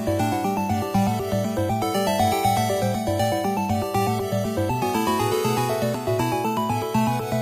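No technical faults can be heard anywhere in this audio.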